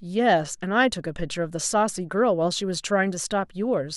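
No technical faults can be heard anywhere in this speech recording. The audio runs without any break or disturbance from its opening moment to its close.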